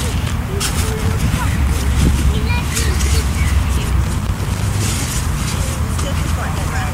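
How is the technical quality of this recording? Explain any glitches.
Two bursts of loose connector crackle spoil it, first from 0.83 to 1.22 s and again from 4.04 to 4.61 s. Both sound like irregular scratchy crackling over the audio, the kind you get when a worn or dirty contact gets nudged. As it shifts, the connection keeps making and breaking, so the signal gets chopped into fragments, and any DC sitting on the line turns each break into a little pop.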